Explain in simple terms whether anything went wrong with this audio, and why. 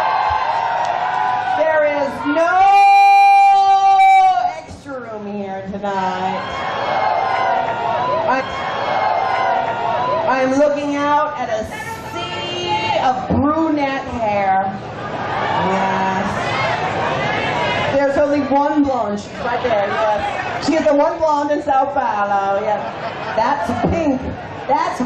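From about 18.79 to 21.71 seconds the audio suddenly rushes ahead, playing roughly 1.57 times faster than the rest, yet the pitch stays exactly where it was, so it sounds hurried rather than higher. This is a time-stretched section. Software likely squeezed that stretch to fit a shorter length, cutting out tiny slivers of sound to save time while keeping the pitch steady, which creates that rushed, jumpy pace.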